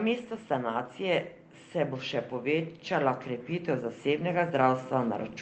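Automatic gain rising from 0.47 s to the end: the gain control judged the input too quiet and steadily raised its gain, so speech and background swell together.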